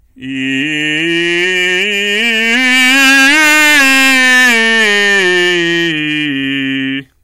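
Hard clipping runs through the whole music clip: driven about 15 dB past the limit, roughly a tenth of samples are flattened, giving harsh fuzz, squared waveform tops, and harmonics smeared upward on a spectrogram.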